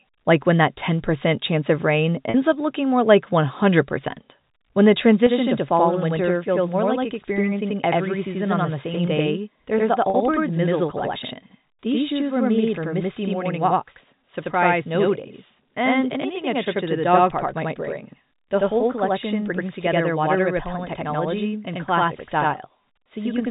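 At 2.30 s there is a brief packet loss with pitch repetition. About 40 ms of audio goes missing, which fits two lost packets. The receiver fills the gap by repeating the last pitch period. It sounds like a short, slightly buzzy held tone. The same fault recurs at 10.10 s, again about 40 ms long.

From 5.27 s to the end, a channel delay causes doubling. One channel runs about 85 ms late, which fits a 4096-sample buffer. Both are summed to mono. The late copy is heard at equal level, as a distinct slap echo behind everything. The narrow telephone band of the G.711 coding is audible beneath it.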